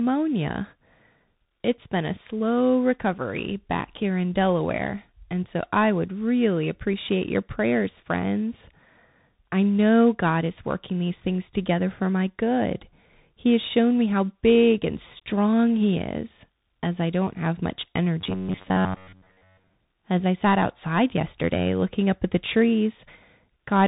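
Throughout the clip there is tandem speech coding. CVSD at 64 kbit/s was decoded and re-encoded through a G.711 A-law link, then coded as CVSD again, so each stage added its errors to the last. The speech sounds rough and noisy. A spectrogram shows nothing above 3.8 kHz.

From 18.21 to 19.73 s, just after "I don't have much", the voice turns into a rigid metallic buzz at 93.8 Hz. This is robotic sound from repeated short buffers, likely caused by audio arriving too seldom, so that chunks of about 11 ms were replayed. The waveform shows near-identical repeating cycles, and the spectrogram shows evenly spaced vertical striations.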